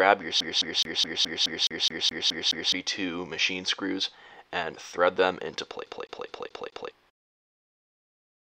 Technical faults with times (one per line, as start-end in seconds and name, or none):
0.40-2.72 CD stuck on one turn
5.86-6.91 CD stuck on one turn